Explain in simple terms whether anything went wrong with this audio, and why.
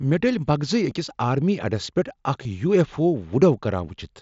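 Twice, at 0.90 s and 2.43 s, a tiny piece of speech went missing. This is concealed Bluetooth headset packet loss. The phone patched each gap by repeating a matching slice of recent sound. The first gap fits one lost packet and the second fits two, so both are very brief.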